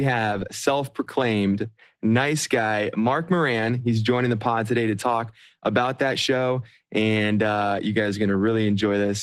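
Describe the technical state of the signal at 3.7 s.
At 3.7 s the speech carries Opus voice compression, present across the whole clip. The band stays full, but the sound is plainly muffled, hoarse and slightly robotic. The coarse excitation points to a low rate near 16 kbps, in hybrid SILK-plus-CELT mode.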